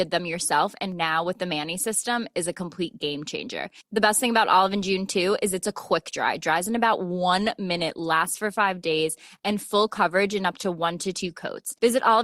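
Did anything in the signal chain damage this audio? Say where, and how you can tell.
Yes: a call bitrate drop at the codec. After "dries in about one", from 7.81 s to the end, the speech turns coarse and muffled, which fits the encoder falling from about 64 to 27 kbps. The loss is steady, with no packet-loss gaps.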